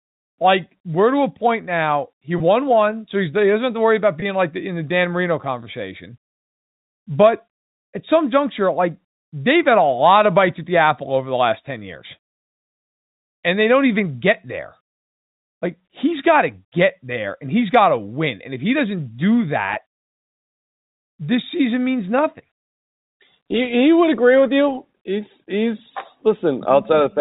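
Packet loss with pitch repetition occurs at 2.38–2.40 s, before "one so he". It recurs at 4.20–4.22 s, after "to worry about", and at 19.74–19.76 s, after "if he doesn't do". Each 20 ms gap fits one lost packet. The last pitch period repeats, giving a brief buzzy hold.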